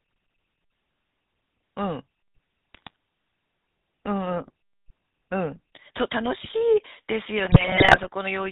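From start to finish the speech passes through the GSM full-rate codec, which rebuilds the voice from a vocal-tract model driven by coarsely spaced pulses, consistent with a 13 kbit/s stream. Nothing above 4 kHz survives, and the voice carries a plainly audible buzzy, gravelly roughness.

GSM bit errors strike from 2.74 to 2.96 s and again from 7.44 to 8.07 s. Corrupted bits reach the decoder, so damaged filter, pitch and gain values distort the spectrum and spike the level frame by frame, breaking the speech into squawks, pops and gargling.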